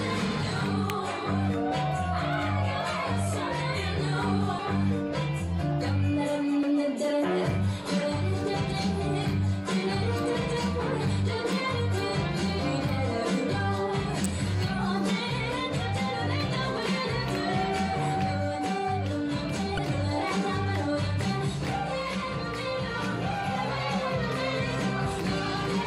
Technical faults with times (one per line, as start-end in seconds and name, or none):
0.90 electrical switching spike
14.24 electrical switching spike
19.75-19.80 damaged data in a compressed stream